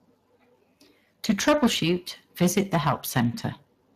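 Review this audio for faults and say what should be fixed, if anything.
Speex codec damage runs through the whole speech recording. The codec models the voice with a small set of parameters and has too few bits for the excitation, so speech comes out hoarse and grainy. The roughness points to a middling Speex setting of roughly 22 kbps. On a spectrogram, nothing appears above 15.4 kHz, and harmonics look smeared and noisy rather than cleanly striped. To prevent it, record or send at a higher Speex quality, or use a more modern codec.

Hard clipping appears from 1.25 to 1.92 s, driven about 15 dB past the limit, and again from 2.41 to 3.23 s at about 10 dB. Peaks exceeded what a stage could pass and were sliced flat, which produces harsh fuzz on the loud parts, worse in the first span. The waveform shows squared-off plateaus on the peaks. The spectrogram shows bright vertical smears of added harmonics reaching high frequencies. 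To prevent it, lower the gain before the overloading stage so peaks stay below full scale.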